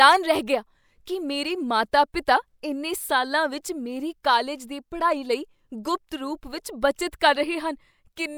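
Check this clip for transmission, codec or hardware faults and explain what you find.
Nothing in this speech recording points to any fault.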